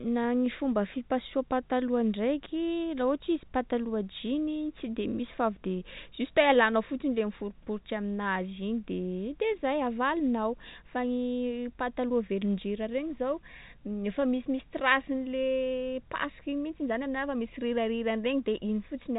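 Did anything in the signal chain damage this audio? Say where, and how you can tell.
No, nothing in the signal chain damaged this audio.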